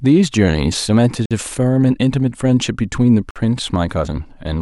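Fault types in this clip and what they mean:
Gap between chunks: The speech was delivered in 2-second pieces, and silence sits at each join between them. No sound is removed. It simply stops, then carries on where it left off. Each hole lasts 50 ms. The first runs from 1.26 to 1.31 s, the second from 3.31 to 3.36 s. They fall about 2 s apart, matching the chunk length. That regular spacing marks them as joins, not natural pauses.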